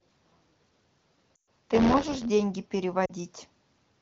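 Speech clip carried over the AMR wideband (HD Voice) codec, with two kinds of fault. From 0.00 to 2.26 s there is buffer tearing: a steady robotic buzz at about 86.1 Hz that sounds only while speech is present. That rate fits a 512-sample buffer. The writing program and the playback hardware have drifted out of step, so roughly a sixth of every period replays audio about 20 ms old, with an abrupt splice at each edge. There are also lost AMR speech frames, at 1.35 to 1.49 s and 3.05 to 3.11 s. Radio errors corrupted these frames, and the decoder filled each gap by stretching the last good frame at falling gain. The first gap lasts 120 ms, which points to a run of six 20 ms frames, and is heard as the sound dropping to near silence within two frames before the voice returns weak and rough. The second lasts 40 ms, a run of two frames, and is heard as a brief drop to near silence. The codec's own coding damage at its 15.85 kbit/s rate is light.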